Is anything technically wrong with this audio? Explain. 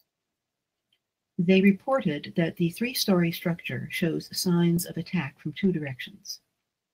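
Yes, there are three brief spots where a lost packet was rebuilt from error correction: at 3.01 s just after "reported that the", at 4.03 s just before "signs of attack from", and at 5.63 s right after "signs of attack from". Each lasts about 20 ms, which fits one missing packet. The next packet carried a low-bitrate backup copy, and the decoder played that instead of leaving a gap. So nothing drops out, but each patch sounds briefly rougher and noisier.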